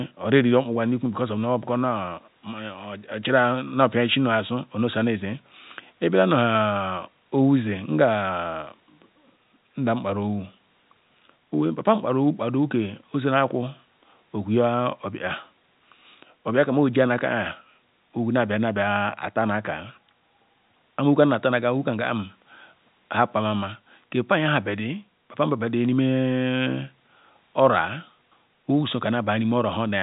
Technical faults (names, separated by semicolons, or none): none